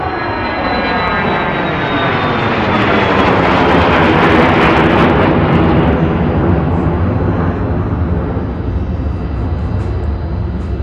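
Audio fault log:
1.08 s, 2.06 to 2.24 s, 2.76 to 6.04 s and 6.50 to 6.54 s, hard clipping. Peaks exceed what the signal path can carry and are cut flat. Overdrive is slight, about 0 to 1 dB, except about 5 dB in the long run. Those flat tops add high harmonics. They crackle on peaks.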